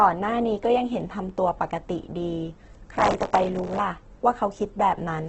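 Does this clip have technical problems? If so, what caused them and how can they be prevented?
Yes. Throughout, the speech sounds grainy and rough, with nothing above 8.2 kHz. This is likely heavy Opus compression at a very low bitrate, around 12 kbps. Encoding at a higher bitrate would prevent it.

From 2.94 to 3.79 s, processor overload crackle tears through the sound. The processor kept missing deadlines for its very short buffers, and old audio replayed with hard edges. A larger buffer or less processing load would prevent it.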